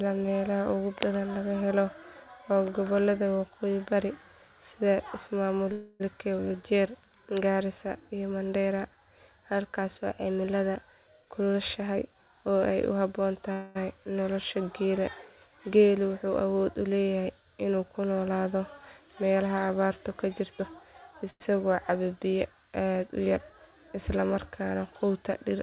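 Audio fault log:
5.72–6.03 s, 13.52–13.78 s and 21.30–21.43 s: call audio freeze. The speech stalls into a fading buzz for 277 ms, 228 ms and 101 ms. The last one ends in 40 ms of silence. Nothing is lost, and speech resumes where it stopped. The likely cause is delayed packets draining the jitter buffer.
11.22–13.49 s and 20.59–20.69 s: jitter buffer speed-up. Speech runs at 109% and then 166% speed at unchanged pitch, so it sounds hurried. Short pitch-period pieces are cut to shrink an overfull buffer, roughly 200 ms and 70 ms in all.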